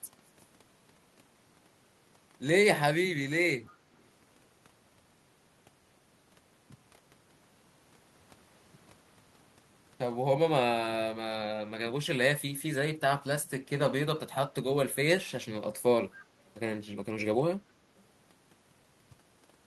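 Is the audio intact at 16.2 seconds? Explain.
No. An echo leak sits at 16.16 to 16.25 s. A faint, delayed copy of the speech, trailing the original by 266 ms and lying well below it, roughly 25 dB down, is heard as a brief ghostly scrap. The likely cause is a far end playing the call over a loudspeaker, where the echo canceller failed to strip everything its microphone picked up, so a short fragment of returned audio slipped back into the line.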